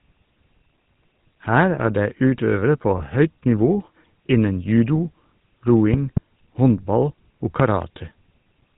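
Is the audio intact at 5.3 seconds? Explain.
No. The GSM full-rate codec runs throughout, including 5.3 s: a pulse-driven vocal-tract model, consistent with 13 kbps, cuts everything above 4 kHz and leaves buzzy, gravelly speech.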